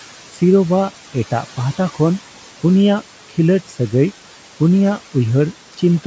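Noise suppressor artifacts run through the whole speech recording. The suppressor estimates the steady room noise band by band and cuts it by about 11 dB, so the background drops away in the gaps between words and comes back underneath them, giving a pumping floor. The room noise sits about 19 dB below the speech, and the call's microphone path cuts everything above 8 kHz.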